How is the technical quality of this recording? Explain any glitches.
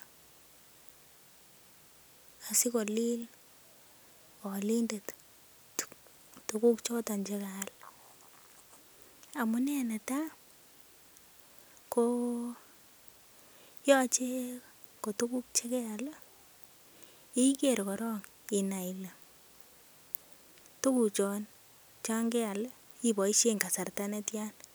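No glitches can be heard anywhere in this speech recording. Nothing in it calls for a technical explanation.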